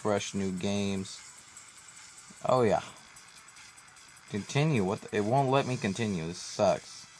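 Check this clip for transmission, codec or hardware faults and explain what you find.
Nothing in the clip stood out as a problem on careful listening.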